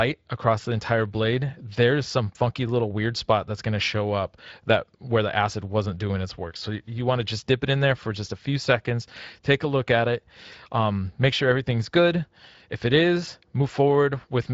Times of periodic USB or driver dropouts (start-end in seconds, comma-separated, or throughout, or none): none